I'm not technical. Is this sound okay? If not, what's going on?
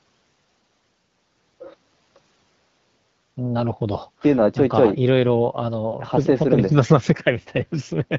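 Yes, no faults here.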